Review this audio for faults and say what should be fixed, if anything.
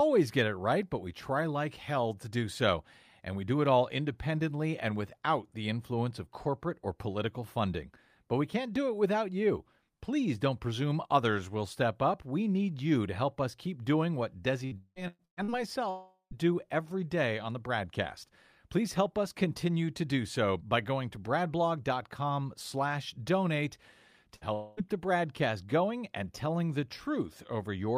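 Repeated packet loss (robotic sound) from 14.65 to 15.51 s: five gaps, the longest 183 ms, are patched by extending prior speech, so about 61% of the stretch sounds choppy.

Long network dropout from 15.90 to 16.34 s, before "every day on the", and from 24.53 to 24.86 s, before "the broadcast going and": the last sound is held and fades, with about 110 ms of silence in the first. The likely cause is a network outage.

Burst of packet loss from 24.36 to 24.44 s, right after "slash donate": about 60 ms is missing, bridged by briefly continuing the last sound and fading it.

A more stable network path, with forward error correction and a deeper jitter buffer, would prevent these gaps.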